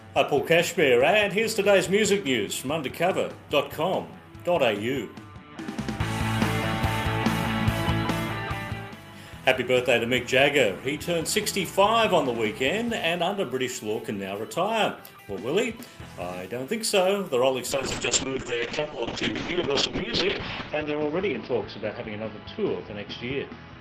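A call bitrate drop hits this audio at 17.73 s: the encoder's allowance falls from 48 kbps to 6 kbps, bottoming out for about 2.6 s, and the audio bandwidth shrinks from 20 kHz to 6 kHz. From there to the end the sound is muffled, coarse and watery.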